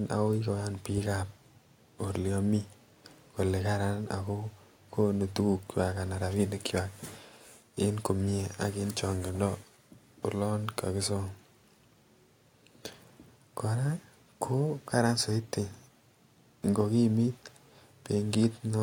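Nothing in the speech stood out as a technical fault on listening.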